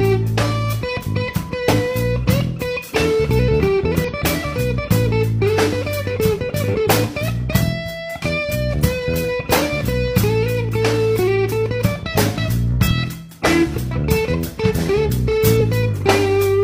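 Brief glitches at 1.68–1.73, 4.04–4.08, 8.46–8.52, 12.87–12.91 and 15.56–15.62 s are damaged data in a compressed stream: corrupted frames make the decoder lose sync.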